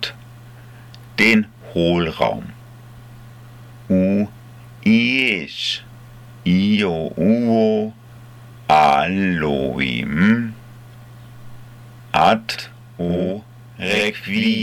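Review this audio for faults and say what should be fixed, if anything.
From 12.55 s to the end at 14.63 s there's a channel delay causing doubling: one side runs about 93 ms late, which fits a 4096-sample buffer, so the mono fold-down hears every sound twice, like an even-level slap echo. To prevent it, keep both channels on a shared, locked buffer clock before summing to mono.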